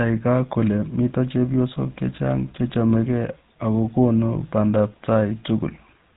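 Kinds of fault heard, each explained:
GSM full-rate codec: a buzzy, gravelly roughness across the whole speech with nothing above 3.8 kHz, from a codec modelling the vocal tract with sparse regular pulses, likely around 13 kbps.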